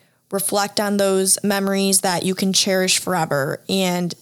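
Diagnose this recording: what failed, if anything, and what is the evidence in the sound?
Nothing failed, and the sound gives no evidence of a fault at any stage of the recording.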